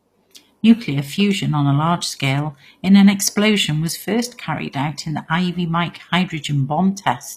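Speech with plainly audible HE-AAC compression throughout, likely from a low bitrate near 24 kbps: treble sounds gritty and lispy, and a spectrogram shows copied, blocky upper bands ending at 15 kHz.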